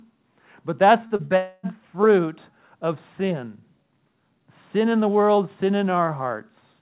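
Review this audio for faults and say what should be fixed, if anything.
Right after "but that's", two brief smears break the speech, at 1.07 to 1.13 s and again at 1.16 to 1.22 s, each a wobble lasting about 30 ms. These are short concealed packet loss. Each time, about 30 ms of audio failed to reach the decoder in time, and the receiver bridged the hole by extending the preceding sound before blending back into the real signal. That is why each spot sounds smeared rather than silent.

From 1.25 to 1.33 s the last sound is continued and fades, and the speech resumes further on, just before "fruit of sin". This is a burst of packet loss. About 60 ms of consecutive audio went missing. The receiver filled roughly 54 ms of it by continuing and gradually attenuating the last sound. The material that should have occupied that span never plays.

A longer smeared stretch follows from 1.36 to 1.66 s, again leading into "fruit of sin". 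For about 0.27 s the last sound is stretched out and fades, with no true silence, and what was said in that span is gone. This is a long network dropout, likely caused by the connection stalling. No real audio arrived for about 270 ms, and the receiver concealed the entire gap instead of falling silent. Together, the clustering of all four events between 1.07 and 1.66 s points to a single unstable patch in the network.

Nothing above 4 kHz is present, which is consistent with a narrowband G.711 call path.

To prevent these losses, stabilise the network link, for example by using a wired connection or reducing competing traffic, and enable forward error correction or a larger jitter buffer so that late or lost packets can be recovered.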